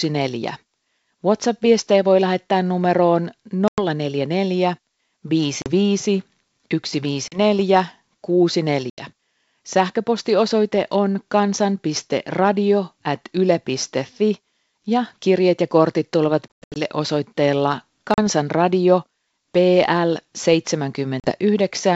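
Packet loss on an ADPCM call cuts hard silent holes at 3.68, 5.62, 7.28, 8.90, 16.52, 18.14 and 21.20 s. The longest is a scattered 220 ms at 16.5 s. The decoder's predictor then restarts out of step, so the speech returns slightly distorted.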